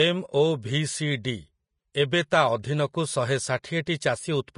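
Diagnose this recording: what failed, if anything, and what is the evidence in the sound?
The failure is at the codec stage. The speech sounds hissy and grainy throughout, and the codec damage is plainly audible. Nothing is present above 10.6 kHz. The likely cause is Vorbis compression at a low setting. The encoder lowered its cut-off and quantised the remaining treble very coarsely. Fine detail was swapped for noise of similar energy. That roughens the tone and points to a bitrate near 33 kbps.

Pre-echo appears at 3.63 s, also from the codec. A brief hiss, about 13 ms long, comes just before a sharp attack. The attack itself sounds soft and smeared. The cause is the transform block. The attack sits late in a block, and the quantisation noise is spread evenly across that block. Noise sized for the loud attack therefore spills into the quiet moment before it.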